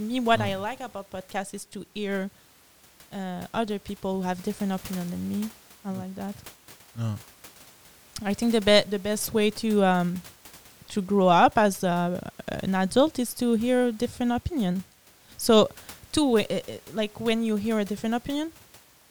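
No technical faults can be heard in this speech recording. A low room noise sits in the background, about 26 dB below the speech, and belongs to the recording itself.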